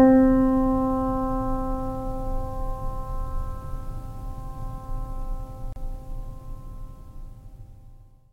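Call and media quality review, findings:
Gap at a join of encoded pieces, music track, 5.73 to 5.76 s. Clean dropout of about 35 ms, edges smeared by the codec, then the music picks up exactly where it left off. Component: segment concatenation. Mechanism: separately encoded pieces joined untrimmed, so encoder start delay plus last-frame padding land as silence. Timing fits roughly 6 s segments. Fix: trim priming/padding or encode gapless.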